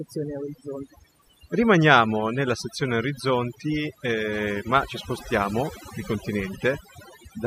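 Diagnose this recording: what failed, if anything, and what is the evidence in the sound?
A noise suppressor in the call-processing chain was set far too aggressively, causing overdone noise removal across the whole speech clip. It treats any frequency band sitting near its noise estimate as noise and drives it toward zero, so the quieter parts of the voice are cut along with the noise. The background drops and breaks up into twinkling specks.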